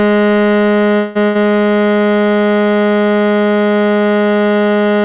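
At 0.96 s the music stalls for about 0.2 s, until 1.17 s. The last sound is stretched into a fading buzz, and then playback picks up exactly where it left off. This is a call audio freeze, likely caused by packets being held up in transit until the jitter buffer ran dry. Nothing is lost, but the 192 ms of filler pushes everything after it later by the same amount.

Shortly afterwards, from 1.25 s to 1.37 s, a burst of packet loss follows. The receiver again extends the last sound and lets it decay over roughly 0.1 s. This time the music resumes further along, so about 100 ms of material is skipped rather than delayed. The whole clip is band-limited with nothing above 4 kHz, which fits a narrowband telephone codec such as G.711 on the call path.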